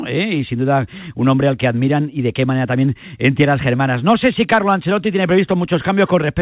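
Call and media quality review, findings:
No faults found in this speech call audio.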